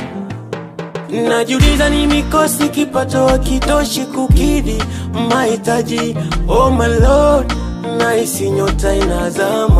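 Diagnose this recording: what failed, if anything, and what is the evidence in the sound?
The codec stage failed: compressed frames were skipped during decoding. Between 0.88 and 0.95 s the audio jumps forward, dropping roughly 50 ms of material. Whole frames were missing or rejected as damaged, so the decoder resumed some frames later. On a waveform the envelope steps abruptly; a spectrogram shows a discontinuity at the join.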